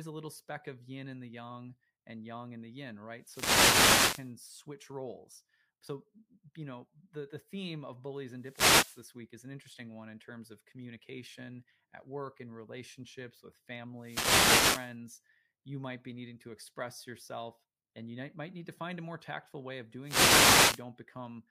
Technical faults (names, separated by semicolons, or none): wireless microphone noise hit